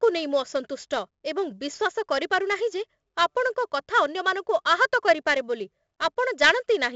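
Throughout the speech, 4-bit ADPCM compression leaves a gritty hiss riding every loud syllable and roughening sharp onsets, where the step size lags. A spectrogram shows level-tracking broadband noise and a hard ceiling near 7.8 kHz, which fits a 16 kHz sample rate.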